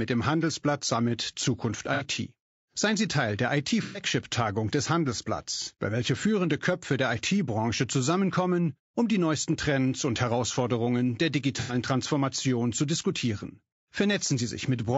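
Low-delay AAC compression runs through this speech clip: the voice is plainly rough and grainy, with noise between its harmonics and a thin, synthetic top band, likely from AAC-ELD's short frames at a low bitrate around 32 kbps. AAC frame loss with concealment occurs at 1.94–2.05 s, 3.83–4.03 s, 5.63–5.68 s just before "bei welcher führende", and 11.60–11.75 s. In each gap the decoder rebuilds the missing audio from the last good spectrum, leaving short smeared, noisy patches.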